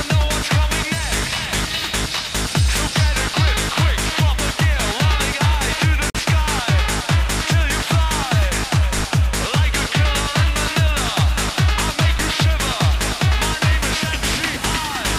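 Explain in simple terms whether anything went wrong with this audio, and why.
Two things go wrong in this audio.

At 6.10 s the sound drops to complete silence for 49 ms, then carries on. This is a Bluetooth stall: the likely cause is wireless interference holding up data on its way to the headphones, so their small store of audio ran out and playback paused until the data arrived. What sets it apart from a crackle or a dropout in the recording itself is that the gap is clean, total silence followed by a normal restart, not a burst of noise or garbled sound.

At 12.18 s there is a single low thump. This is a DC step: the waveform's resting level suddenly shifts away from zero, and that sudden shift is what you hear as the thump. The offset then fades back toward zero over the following moments, because a filter that removes very low frequencies, below 5 Hz, pulls it back. Unlike the stall, nothing goes missing. 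The sound keeps playing straight through the thump.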